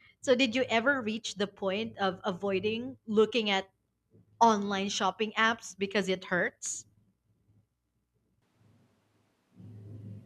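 Speech turns abruptly roomy and thin in the bass from 8.42 s to the end, likely a switch to a distant microphone. Unlike added reverb, room noise rises too, to roughly 30 dB below the speech.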